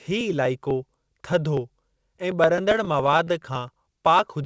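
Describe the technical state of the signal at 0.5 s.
At 0.5 s the signal is inside a run of periodic USB or driver dropouts that starts at 0.08 s and lasts to the end of the clip. Something blocks the USB bus or audio driver every 0.124 s, about eight times a second, and a little speech is skipped outright each time, leaving splice discontinuities heard as a steady train of ticks under the speech. The band stops at 8 kHz, consistent with a G.722 call path.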